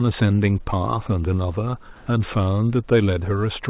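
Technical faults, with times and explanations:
1.96–2.06 s, comfort noise in place of the background: for about 100 ms the real room background gives way to a flat, featureless hiss about 6 dB different in level, likely because discontinuous transmission stopped sending during the pause and the receiver filled it with synthetic noise.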